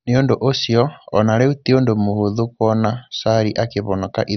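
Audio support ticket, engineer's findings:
Likely MP2 compression throughout, at a bitrate consistent with about 48 kbps. Encoder starved of bits: upper sub-bands switched off, remaining bands coarsely quantised. Speech dull, nothing above 6.1 kHz, heavy gurgling, granular distortion as bands flicker on and off.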